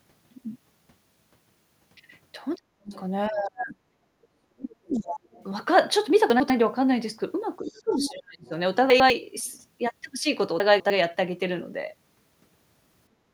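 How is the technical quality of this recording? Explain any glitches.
The recording has several echo-cancellation and buffering faults. Speech is pulled down during overlapping talk, the far end bleeds through, audio chunks play out of sequence, and the room sound briefly ducks at the end.

Speech suppressed in double talk, 2.56 to 5.28 s and 7.61 to 8.52 s: with both ends talking, the echo canceller likely couldn't separate the local talker from loudspeaker echo and attenuated everything. The speech sinks by up to about 40 dB in the first stretch and about 30 dB in the second, fading and breaking up.

Other side's voice leaking through at 2.87 to 3.0 s, 3.72 to 4.27 s, 4.9 to 5.44 s, 7.78 to 8.49 s and 9.47 to 9.51 s: residual echo of the far end, played on the talker's own loudspeaker, was likely left in the microphone signal. A second voice is heard underneath. It is strongest around 7.8 s, about 10 dB below the speech, and barely there at 9.5 s.

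Chunks out of order at 6.3 to 6.5 s, 8.9 to 9.1 s and 10.6 to 10.9 s: 100 ms blocks were written late, one block behind in the first two cases and two behind in the third. Nothing is missing, but each spot sounds like a jumbled stutter at the hard joins.

Background gated by the echo canceller, 13.13 s to the end: while the loudspeaker played, the canceller clamped the microphone. The room tone drops by about 12 dB for roughly the final 0.2 s.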